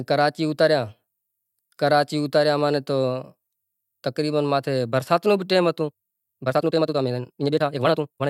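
Speech recording with a time-stretched section from 5.86 s to the end at 8.29 s. The pace abruptly doubles while the pitch holds, sounding rushed, likely from software dropping short slices to shorten the audio. A spectrogram shows squeezed syllables with unchanged harmonic spacing.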